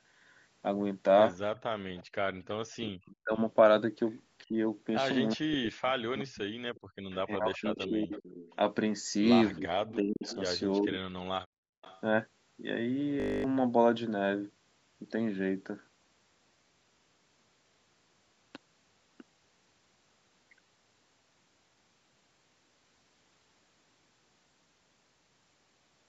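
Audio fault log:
1.95–3.39 s and 6.75–12.01 s, echo leak: a faint delayed copy of the sound trails the original by about 364 ms, quiet at about 25 dB below it in the first stretch and a little stronger, about 20 dB below, in the second. It is likely that the far end's echo canceller let part of what its microphone heard from its loudspeaker slip through, so the talker hears themselves returned a third of a second late.
2.35–11.1 s, speech suppressed in double talk: within this span the speech sinks repeatedly, in pieces adding up to roughly 4 seconds, at its deepest about 40 dB down, close to vanishing. The likely cause is an echo canceller that could not tell the local talker from loudspeaker echo while both sides spoke together, and so pulled everything down at once, the wanted speech included.
6.81–7.08 s and 11.46–11.82 s, background gated by the echo canceller: the room sound between words drops away abruptly, by about 40 dB, for roughly 0.3 s and then 0.4 s, before returning. 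The echo canceller clamped the microphone hard while the loudspeaker was playing, so even the background ambience was shut off until it released.
13.2–13.44 s, system hang loop: a brief buzz at 50 Hz replaces the sound, because one 20 ms piece of audio repeats exactly 12 times in a row. The computer or its driver stalled while the audio hardware kept replaying the same small ring buffer, which fits a 20 ms buffer, and about 200 ms of real audio is lost underneath the buzz.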